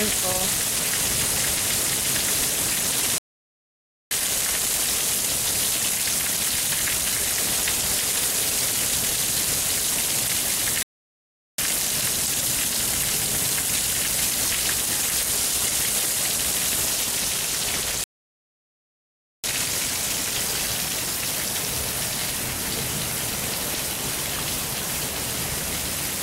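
At 3.18 s the sound cuts out abruptly and stays silent for about 0.93 s, picking up again at 4.11 s. The same playback stall returns at 10.83 s for about 0.76 s, then at 18.04 s for the longest gap, about 1.4 s. Each break lands mid-flow, which points to the player likely running dry of buffered data or having its output thread blocked until it caught up.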